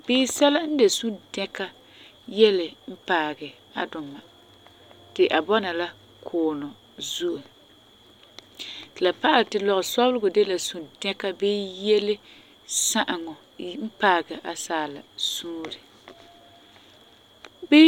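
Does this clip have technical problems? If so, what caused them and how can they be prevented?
No, there are no technical problems to point to in this speech recording. With nothing going wrong, there is no cause to trace and nothing that needs preventing.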